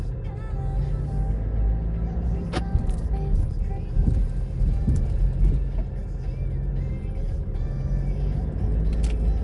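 Throughout, the audio was likely squeezed through Nellymoser compression, starving weak bands of bits; nothing survives above 10.6 kHz, leaving a rough, hissy, smeared underwater quality.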